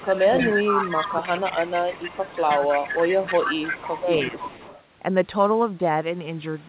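From 0.0 to 4.49 s the speech dips by up to about 10 dB for roughly two seconds in total, likely speech suppressed in double talk as the echo canceller ducked the talker along with the echo. Across 0.0 to 4.83 s a copy of the voice trails 312 ms behind at about 10 dB down, likely an echo leak from a loudspeaker the canceller didn't fully clean.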